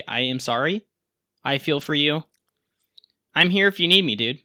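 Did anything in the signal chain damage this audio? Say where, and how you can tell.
Yes, at the network stage. From 1.77 to 1.91 s, and again briefly from 3.41 to 3.43 s, the speech turns rougher and noisier without ever dropping out. That is a lost packet rebuilt from error correction. Packets went missing in transit, and the following packets carried low-bitrate backup copies that the decoder played instead. The first stretch rebuilds about 80 ms of audio, which fits four separate lost packets; the second covers 20 ms, consistent with a single one.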